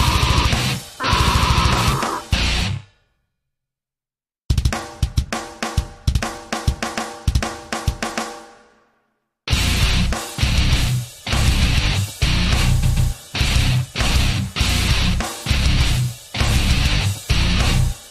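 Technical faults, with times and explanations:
12.82–13.10 s, repeated frames: a run of compressed frames reached the decoder more than once, so a 139.3 ms block of audio was played twice more right after its first pass. The result is a short stutter, with the same fragment heard three times in a row. The repeated block fits a run of about six frames being duplicated. The repeats add 278.6 ms to the clip's running time.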